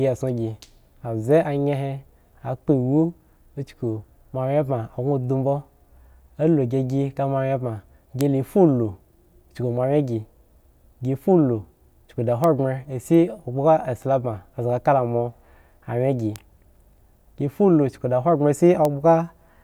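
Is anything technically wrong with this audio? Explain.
Yes. Bit error spikes occur at 8.21, 12.44, 16.36 and 18.85 s. At each point a single flipped bit in memory or on a digital link throws a sample's value off by a power of two before it snaps back. These spikes are so brief they fit one or two corrupted samples. Each produces a sharp broadband tick unrelated to the speech, peaking at about -5 dBFS, except at 16.36 s, where it peaks at about -12 dBFS.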